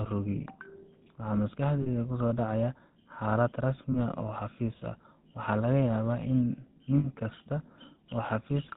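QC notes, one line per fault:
Throughout: GSM full-rate codec. The speech is modelled as a vocal-tract filter excited by sparse regular pulses, giving a plainly audible buzzy, gravelly roughness consistent with 13 kbps coding. A spectrogram shows nothing above 4 kHz and smeared, grainy harmonics; the waveform looks coarse.
1.82–1.88 s, 3.92–3.97 s, 6.98–7.07 s: lost GSM frames. Each gap, 40 ms, 20 ms and 60 ms long, which fits two, one and three dropped 20 ms frames, is filled by repeating the last good frame, giving a brief metallic ring. A spectrogram shows frozen, repeated spectral bands; the waveform shows a repeated pattern.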